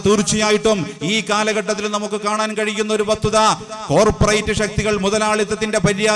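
No audible technical faults anywhere in the sound.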